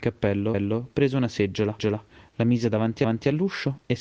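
Speech with overlapping chunks: at 0.54–0.79 s, 1.79–2.04 s and 3.04–3.29 s, a 250 ms stretch plays twice, as each 1 s chunk restarts before the previous one ends. Unlike dropouts, nothing goes missing; sound is duplicated, giving a regular stutter.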